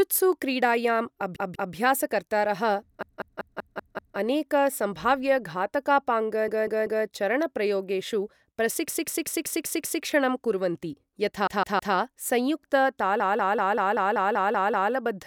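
Repeated frames stutter the speech at 1.36–1.74, 3.02–4.18 (just before "अनेक सम्भाव्य"), 6.48–7.06, 8.88–10.03, 11.47–11.95 and 13.20–14.93 s. Each time, a 192 ms block of compressed audio (160 ms at 11.47 s) replays two to nine extra times, lengthening the clip.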